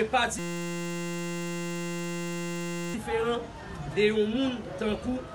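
From 0.39 to 2.94 s there's a system hang loop: the machine or driver froze while the hardware kept replaying one 5.8 ms chunk, which fits a 256-sample buffer, hundreds of times over. That short loop comes across as a steady buzz at about 172 Hz.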